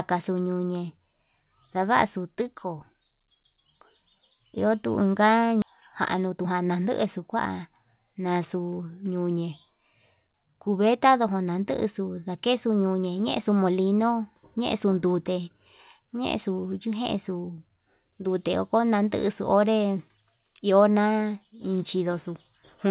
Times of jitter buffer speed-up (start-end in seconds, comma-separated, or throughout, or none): 6.16-6.87